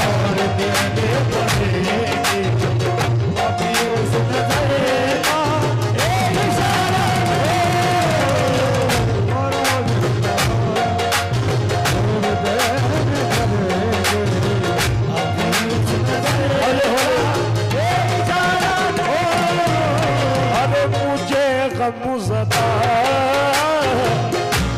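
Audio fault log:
No faults were found in the audio path; the signal holds steady in level, timing and bandwidth across the whole recording.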